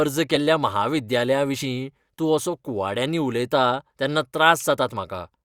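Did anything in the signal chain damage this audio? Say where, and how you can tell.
Yes, at the codec stage. This speech has compressed frames skipped at 0.35 s, 1.61 s and 3.07 s. At each point the audio jumps forward by a short chunk, roughly 20, 30 and 20 ms, which fits two or three whole frames of a codec working in 10 ms frames. Either those frames never reached the decoder or it threw them out as damaged.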